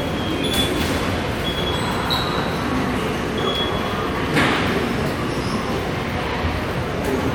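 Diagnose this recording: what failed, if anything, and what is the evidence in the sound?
Nothing failed; no fault is audible in these sounds.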